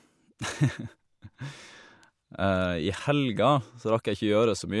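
Speech recording, no technical faults heard anywhere in the clip.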